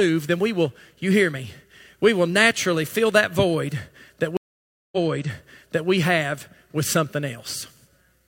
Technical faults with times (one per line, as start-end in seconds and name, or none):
4.37-5.90 stream reconnect